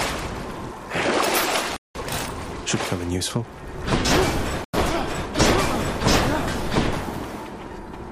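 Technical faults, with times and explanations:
1.77 to 1.95 s and 4.64 to 4.74 s, block of digital silence: the audio cuts to silence with no fade for about 186 ms, then about 93 ms. The lengths suggest whole 8192- and 4096-sample buffers weren't filled in time.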